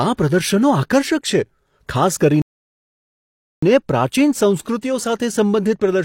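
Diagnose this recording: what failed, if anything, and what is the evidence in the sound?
A rebuffering stall runs from 2.42 s to 3.63 s, right after "છે ખાસ". The speech cuts to silence and then picks up exactly where it stopped, adding about 1.21 s to the running time without losing any sound. The stage is network delivery into playback: the player drained its downloaded audio, halted until more data arrived, and then resumed from the same position rather than skipping ahead.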